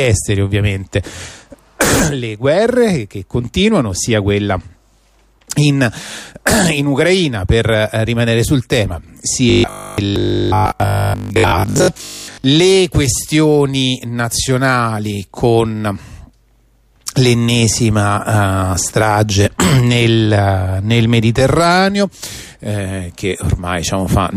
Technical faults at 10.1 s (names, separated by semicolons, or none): robotic sound from repeated short buffers